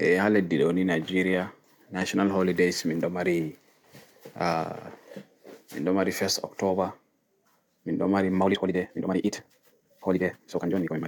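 A time-stretched section runs from 8.42 s to the end at 11.07 s. Here the speech suddenly moves at twice its earlier pace while the pitch stays where it was, so it sounds rushed. The likely cause is software compressing this stretch to fit a set length, holding pitch steady by cutting out small slices of the waveform rather than playing it faster.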